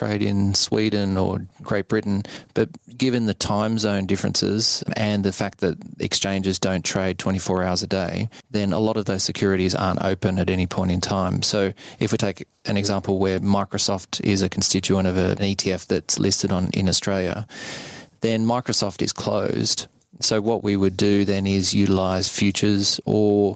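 Gain pumping runs through the whole speech clip, with the gain swinging about 15 dB. Likely cause: gain set far too high, with a fast limiter clamping each peak. Dynamics sound squashed. Nothing sounds above 8 kHz.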